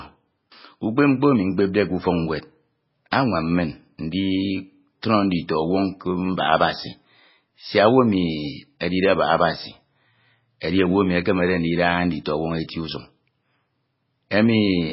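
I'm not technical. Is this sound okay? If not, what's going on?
No, not quite. The whole recording has a dull, muffled quality, as if someone put a blanket over the speaker. Nothing above about 5.5 kHz survives, so the crisp edges of s and t sounds are gone, and there's a strong watery, swirly texture behind the voice. That's most likely heavy MP3 compression: the file was squeezed very hard, so the encoder threw away the treble and the quieter details to save space.

There are also three spots with pre-echo, at about 3.11 s, 5.02 s and 10.60 s. Each time, a sharp sound in the speech is preceded by a tiny burst of hiss, around 12 to 13 milliseconds long, and the sharp sound itself comes out soft and smeared. This happens because the compression handles the audio in small chunks and spreads its noise across each whole chunk, including the quiet moment just before the sudden sound.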